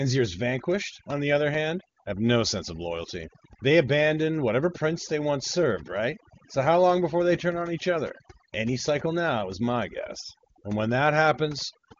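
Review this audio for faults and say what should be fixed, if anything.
Overdone noise removal runs throughout the recording. The noise reducer was set too aggressively, so any frequency band close to its noise estimate was pulled far down or switched off entirely, and the quieter parts of the voice were cut along with the noise. The background drops and breaks up into small twinkling specks. The band limit near 7.4 kHz fits a wideband HD Voice call at a high rate. To prevent this, set the noise reduction to a gentler depth and check the result on quiet passages before release.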